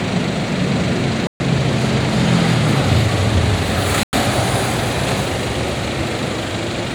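At 1.27 s the audio drops into a block of digital silence until 1.40 s, a 130 ms hole. A second one runs from 4.03 to 4.13 s, about 97 ms. The output was replaced by zeros with no fade, so each is heard as a short hole.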